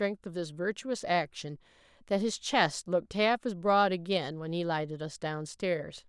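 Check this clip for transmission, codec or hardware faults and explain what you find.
No transmission, codec or hardware faults are audible here.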